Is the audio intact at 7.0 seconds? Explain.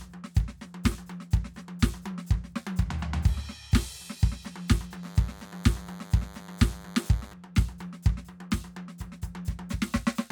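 No. At 7.0 seconds the music carries DECT cordless phone buzz, running from 5.03 to 7.33 s. A nearby handset's 100 Hz radio bursts are rectified into a thin, harmonic-rich buzz, well below the music.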